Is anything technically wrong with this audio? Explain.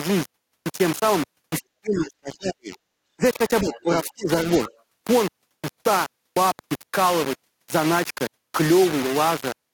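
Yes. The speech has three distinct faults.

Low bit depth without dither runs through all 9.7 s. The waveform is a coarse staircase of a few levels, which fits roughly 3-bit quantisation, likely from rounding with no dither. The error follows the signal, so it sits only about 10 dB below the speech. It is heard as harsh, gritty distortion that changes with the voice. Quiet passages sputter or drop to silence. On a spectrogram, broadband hash clings to every syllable, with nothing between them.

Speech suppressed in double talk occurs at 1.6–2.77 s, 3.17–3.24 s and 3.61–4.29 s. In the first span the level drops by as much as roughly 40 dB, and by about 20–25 dB in the later two. This is likely an echo canceller mistaking simultaneous talk for echo and attenuating everything. The voice dips, dulls or cuts out in pieces. The waveform shows the envelope pinched to near nothing, and the spectrogram shows energy, especially at the top end, abruptly fading.

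The other side's voice leaking through appears briefly at 3.73–3.83 s and 4.65–4.82 s. A second voice is heard about 20 dB below the main speech. The likely cause is loudspeaker playback reaching the microphone and escaping incomplete echo cancellation. On a spectrogram these show as faint, separate harmonic traces. In the waveform they are small extra bursts riding on the signal.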